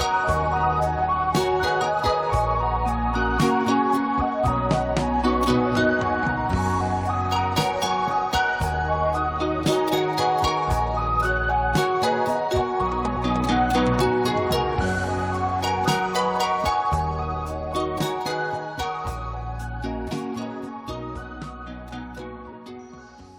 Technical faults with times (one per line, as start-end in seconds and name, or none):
1.80 compressed frames skipped